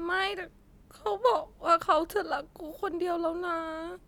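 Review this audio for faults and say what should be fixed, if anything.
Nothing here needs fixing, since I couldn't hear a single fault anywhere in the recording.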